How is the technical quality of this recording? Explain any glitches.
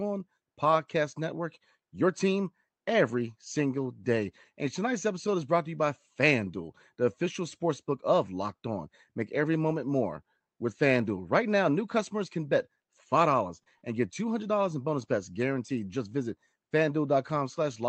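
The recording has one glitch, a cluster of scattered short gaps in a speech clip carried over a call path whose codec limits the band to about 8 kHz, which points to Opus.

Between 11.59 and 14.01 s, a few packets, about 80 ms of audio, were lost or late. The receiver covered each hole by extending the preceding sound, giving brief ticks and smears. On a waveform, a few short stretches, the longest around 40 ms, look repeated; a spectrogram shows smeared, flattened patches.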